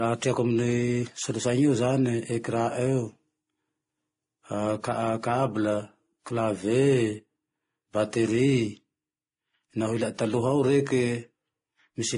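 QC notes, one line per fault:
Throughout, transcoding between lossy codecs. The artefacts of the different codecs are heard together. This is likely a chain of lossy encodes. The lowest cut-off in it survived. Each later pass also spent bits re-coding the earlier damage. The mix fits an AAC-LC stage, then WMA, then a final MP3 at low bitrate.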